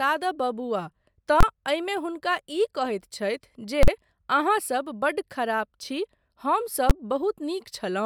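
Three loud hits break into the speech, at 1.41 to 1.43 s, 3.83 to 3.88 s and 6.90 s, each one invalid numbers at full scale. A calculation blew up into infinite or invalid values that got pinned to maximum level for a whole processing block. The lengths, roughly 23 ms, 46 ms and 12 ms, fit blocks of 1024, 2048 and 512 samples. Blocks this short come across as a single hard bang rather than two separate pops.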